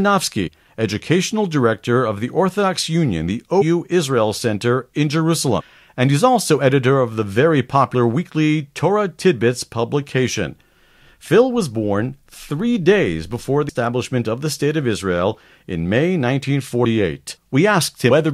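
Jumps, where the speech lurches forward, occur at 0.46–0.48, 3.61–3.63, 5.59–5.62, 7.94, 13.69, 16.84 and 18.11 s. These are compressed frames skipped: whole frames never decoded, dropping between roughly 40 and 200 ms of audio.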